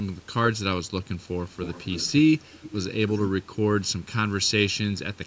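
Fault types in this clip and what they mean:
Channel delay (comb filtering): one channel reaches the mix late by a fraction of a millisecond, roughly 0.7 ms, and summing the two to mono cancels what they share at evenly spaced frequencies. The first notch sits near 700 Hz, with further notches repeating roughly every 1.4 kHz above it. For the whole clip this gives the speech a hollow, phasey colouring that stays fixed rather than moving with the voice.
Echo leak: one side of the call is likely playing the audio over a loudspeaker, and its echo canceller did not fully remove what its microphone picked up, so that residue was sent back as a copy of the speech arriving 270 ms late. It appears in six separate bursts between 1.49 and 5.18 s. The strongest, around 3.08 to 3.27 s, is about 10 dB below the speech, and the faintest is about 40 dB below.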